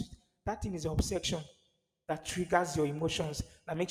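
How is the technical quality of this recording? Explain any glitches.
The recording is marred by periodic USB or driver dropouts. From about 0.99 s to 3.74 s, roughly every 0.25 s, a couple of milliseconds of audio is replaced by silence. A background process is briefly stalling the audio path at a fixed interval. The result is about ten evenly spaced ticks, audible only while speech is present.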